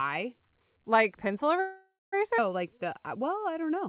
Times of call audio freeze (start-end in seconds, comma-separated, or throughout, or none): 1.60-2.14